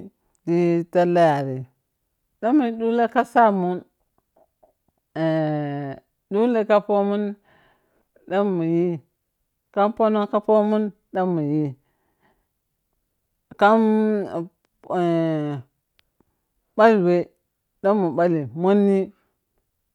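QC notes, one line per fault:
18.58 s, dropped samples: one sharp click. Likely a couple of samples went missing, so the waveform steps abruptly to a later value.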